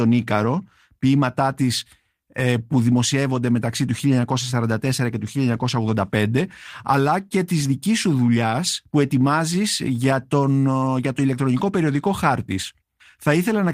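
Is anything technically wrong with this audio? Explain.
No, nothing stood out as technically wrong on listening to this speech recording.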